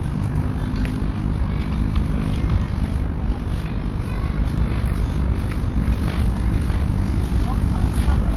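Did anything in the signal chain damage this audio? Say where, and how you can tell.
Yes. In a frame-based processing stage, the sound carries overlap-add ripple from start to finish. The level pumps by about 6 dB around 50 times a second, giving a rough, robotic flutter. The frames were windowed and rejoined with overlaps that do not sum to constant gain.

A doubled audio track begins abruptly at 4.58 s and runs to the end. A full-band copy, about 5 dB quieter, trails the original by roughly 0.7 s with no decay or room colour. The cause is likely an edit or a second capture path holding a delayed duplicate.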